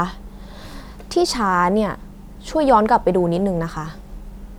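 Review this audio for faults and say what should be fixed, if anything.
No faults found, so nothing needs fixing.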